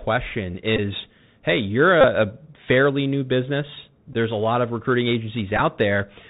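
The whole clip has a narrow, boxed-in quality, with nothing audible above 4 kHz, a grainy hiss beneath the speech, s sounds turned scratchy and loud bright moments breaking up. This is the Bluetooth CVSD headset codec: its one-bit, 64 kHz up-or-down coding can't keep pace with fast, loud changes.

Short buzzy stutters interrupt the speech at 0.77 to 0.80 s, 2.01 to 2.05 s, 4.13 to 4.16 s and 5.57 to 5.60 s. These are Bluetooth headset packet repeats: audio between headset and phone went missing, and the last packet was replayed in its place, producing a buzz near 267 Hz. The gaps cover about 15, 26, 11 and 19 ms, and the final one is broken into scattered bits over 30 ms, with the longest stretch around 10 ms.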